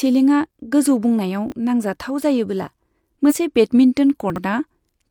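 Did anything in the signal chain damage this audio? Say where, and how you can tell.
Yes. Chunks out of order, at the buffer or network delivery stage, show up twice. At 1.48 to 1.52 s, just before "नांजाथाव जायोबोला", a 20 ms block plays one slot late, and at 4.30 to 4.38 s a block is displaced three slots. Nothing goes missing, but the speech stumbles briefly at three hard joins. The fixed 20 ms step points to a packet or buffer-write sequencing error.

Damaged data in a compressed stream, at the codec or storage stage, appears at 3.26 to 3.33 s, right after "नांजाथाव जायोबोला". Corrupted bytes there throw the decoder off its frame sync, so it misreads the stretch until it finds a valid frame header again. The result is a short glitch, about 70 ms long.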